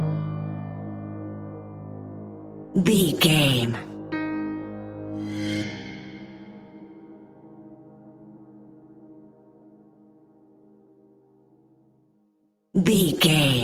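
Nothing stood out on listening; no technical fault could be heard anywhere in the recording.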